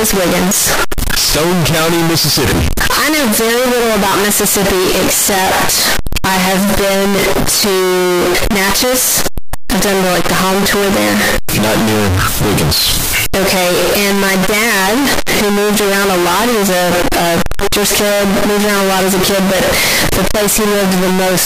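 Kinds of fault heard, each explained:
Float read as integer: the whole speech track is blaring and harsh, flattened into near-square waves at an almost fixed, high level, with background noise as loud as the talking, though pitch stays traceable. Likely 32-bit float samples read as 32-bit integers, so sign and exponent bits set the level.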